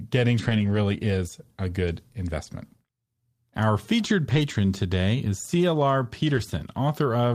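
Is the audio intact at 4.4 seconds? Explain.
No, not quite: from 4.29 to 4.39 s, just before "today is", the speech turns briefly rough and noisy without any gap. This is a lost packet rebuilt from error correction, with low-bitrate copies from following packets filling roughly 60 ms.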